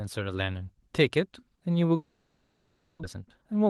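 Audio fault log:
1.95–3.05 s, long network dropout: likely a network outage stopped packets arriving, so the receiver stretched the last sound into a fading buzz, then 240 ms of silence; 600 ms never played.
3.15–3.66 s, jitter buffer speed-up: with excess delay queued after the dropout, the receiver trimmed short pitch-period pieces, roughly 40 ms in all, so the speech runs 7% faster at unchanged pitch.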